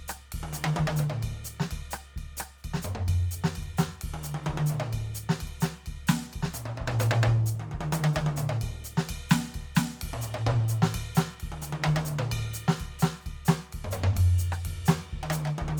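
Across the whole music clip there is plainly audible codec damage consistent with Bluetooth LC3 compression, which is the likely cause. Much of the upper spectrum sounds thinned and partly replaced by synthetic noise, so sustained tones carry a grainy, breathy edge, and nothing is present above 20.2 kHz. The damage fits a transform codec working in 10 ms frames at a modest rate of about 48 kbps, where too few bits are left for high-frequency detail.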